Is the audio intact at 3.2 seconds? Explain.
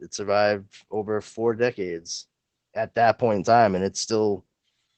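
No. At 3.2 seconds, as across the whole speech clip, Opus voice compression is at work. The codec is running its SILK linear-prediction mode in wideband, so nothing survives above about 8.6 kHz, and the excitation is coded coarsely. The damage is plainly audible, which fits a low bitrate of around 12 kbps. The speech sounds muffled and dull at the top, with a hoarse, slightly robotic edge to the voicing.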